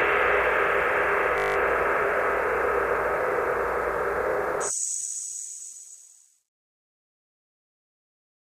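From 1.38 to 1.56 s the audio turns into a steady, mechanical buzz pitched at about 50 Hz, as a single 20 ms slice repeats exactly nine times. This is a system hang loop: the computer or its driver stalled while the sound hardware kept replaying the same small ring buffer, which fits a buffer of around 20 ms. Once playback resumes, essentially no audio appears to be missing.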